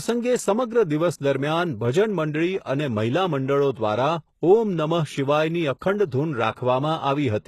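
A speech clip with plainly audible HE-AAC compression damage running through its whole length. The treble is still present up to a hard ceiling at 12.3 kHz, but it sounds synthetic: s sounds come out gritty and lispy, and the upper harmonics don't line up with the voice below them. That rebuilt, misaligned brightness is what separates it from an ordinary low-bitrate codec, which would simply dull the top end. The likely cause is spectral band replication at a very low bitrate, in the region of 16 kbps.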